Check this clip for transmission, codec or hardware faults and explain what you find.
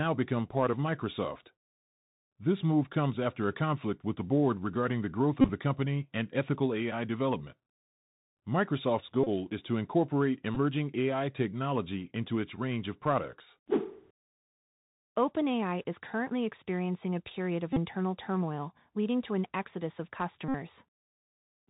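Two faults are present: the speech was carried through a Bluetooth CVSD headset codec for the whole clip, and at five points the Bluetooth headset packet was repeated after losses on the link.

The Bluetooth CVSD headset codec affects the entire recording, and its damage is plainly audible. CVSD sends one bit per sample, consistent with a 64 kbps stream, telling the decoder only to step up or down while the step size adapts. Everything above 4 kHz is gone, so the speech sounds narrow and telephone-like. Sibilants come out scratchy, loud bright passages distort where the signal outruns the step, and a grainy hiss sits underneath. On a spectrogram the energy stops abruptly at 4 kHz, with a speckled noise floor below it.

The Bluetooth headset packet was repeated at 5.41–5.50 s, 9.24–9.29 s, 10.55–10.57 s, 17.73–17.78 s and 20.48–20.55 s. When packets went missing, the chip decoded the previous packet's bits again. 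At 5.41 s the losses total about 49 ms, scattered over about 83 ms, with the longest run about 30 ms. At 20.48 s 60 ms is lost. Each run loops the same 3.75 ms slice, producing a brief buzz near 267 Hz. On a waveform these show up as short stretches of identical repeating cycles. A spectrogram shows evenly spaced horizontal harmonic lines at multiples of 267 Hz.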